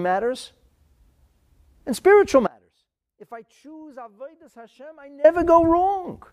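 At 2.47 s, right after "and spiritual", the speech drops out abruptly to a faint residue until 5.24 s, a gap of about 2.8 s. Only a weak trace of the sound remains, roughly 25 dB below its normal level, most likely because the signal feed was lost while the path downstream stayed live. On a waveform the envelope collapses to a thin band with vertical edges at both ends; a spectrogram shows a faded block, not a gradual taper.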